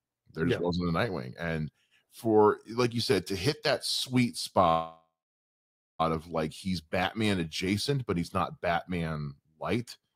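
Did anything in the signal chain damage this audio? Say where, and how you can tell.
Yes. A call audio freeze on the network likely emptied the jitter buffer. After "to hit that sweet", 4.69–6.01 s fades to silence, then "of like he's" resumes, delayed but not lost.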